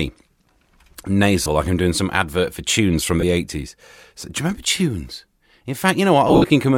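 Lost LE Audio frames: the LC3 decoder covered each gap by reusing the last spectrum with random signs, turning the speech into a brief noisy smear: 30 ms at 1.43 s, 20 ms at 3.21 s, then scattered losses from 6.28 to 6.50 s, where the longest run, about 70 ms, fades away.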